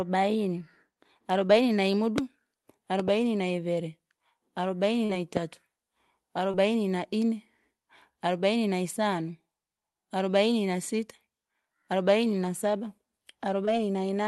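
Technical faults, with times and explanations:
1.47 s, 5.05 s, 6.51 s and 13.65 s: short concealed packet loss. Around 20 ms of audio went missing each time, about 40 ms at 5.05 s, and the receiver papered over it by stretching the preceding sound and fading back in, so you get a quick smear or wobble. The one at 6.51 s lands just before "na ine".
2.18 s, 3.00 s and 5.37 s: loud pop. A sharp click punches through while the speech carries on underneath, about 20 dB above it at 2.18 s, a double pop around 10 dB up at 3.00 s, roughly 15 dB at 5.37 s. Likely a voltage spike from a connector, switch or static discharge.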